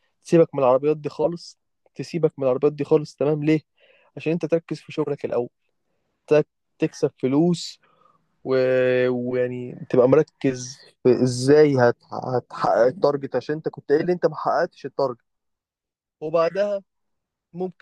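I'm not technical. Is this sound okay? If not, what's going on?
No. There are two brief chirps or bursts of noise, at 1.23 to 1.28 s and 13.97 to 14.06 s; the first is noticeably louder. Each is a corrupt frame decoded: a few damaged chunks of compressed speech were played anyway, misplacing sound energy.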